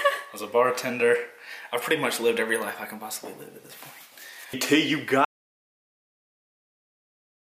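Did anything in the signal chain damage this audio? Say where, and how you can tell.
Yes. There is an audio dropout to silence from 5.25 s to the end of the clip. The sound stops mid-flow and is replaced by silence, with no room tone. That points to the input stage. The device or link was likely lost while the recorder kept writing samples.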